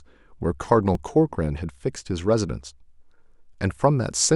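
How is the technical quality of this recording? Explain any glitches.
One glitch stands out. At 0.95 s there is a repeated buffer: audio arrived late, so the device replayed its last 5.8 ms block, which fits a 256-sample buffer, and roughly 5 ms went missing. It sounds as a brief click, not a silent dropout.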